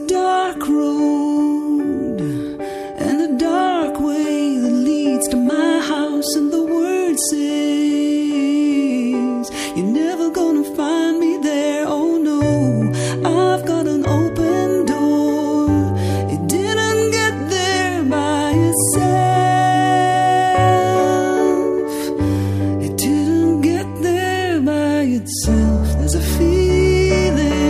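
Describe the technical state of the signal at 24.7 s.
At 24.7 s the signal is intact, with no dropout, clipping, glitch or other fault.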